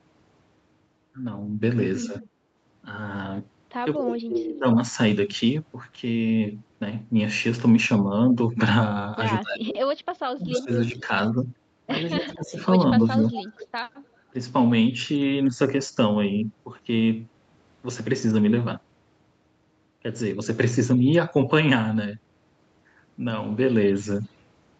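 At 2.03 s an echo canceller on the far, loudspeaker side likely failed to cancel everything its microphone picked up. The leftover was sent back, and a faint copy of the sound follows itself about 220 ms late, well below the main level, until 2.21 s. This is echo leak. It returns from 10.53 to 11.01 s at about 230 ms delay and close to full loudness, and again from 12.2 to 13.67 s, faint again.

Partly overlapping these moments, the canceller likely could not separate the near talker from the echo while both were active, and turned everything down. This is speech suppressed in double talk. The audio dips by about 10 dB briefly around 2.07 to 2.14 s. Deeper cuts of roughly 20 dB come between 3.95 and 4.66 s and roughly 25 dB in stretches between 9.4 and 11.11 s. Another cut of about 15 dB falls between 12.21 and 13.26 s. These are heard as the sound ducking or dropping out in pieces.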